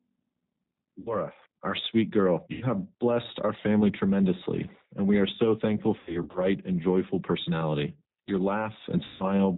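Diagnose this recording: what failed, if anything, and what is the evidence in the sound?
The speech sounds rough and slightly synthetic throughout, with nothing above 4 kHz. The cause is the codec stage: G.729 at 8 kbit/s rebuilds the voice from a filter and sparse pulses.

Buzzy or noisy, fading stretched sounds appear at 1.0–1.17 s before "our sweet girl", 2.53–2.65 s before "blessed our family tremendously", 5.99–6.4 s before "and joyful personality", and 9.04–9.24 s. This is network packet loss concealed by the speech codec, which extrapolated its last pitch across 60–160 ms gaps, with 200 ms lost in scattered runs of up to 80 ms around 6 s.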